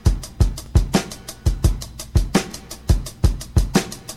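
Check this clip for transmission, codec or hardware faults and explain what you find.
Two repeated-buffer faults occur, at 0.66 to 0.68 s and at 2.52 to 2.54 s. In each, new audio failed to reach the output in time, so the device replayed its previous block once. That block is about 21 ms long, which fits a 1024-sample buffer. The same fragment therefore sounds twice, with a hard join where the repeat starts. Each is heard as a brief stutter or click, and essentially no audio is lost.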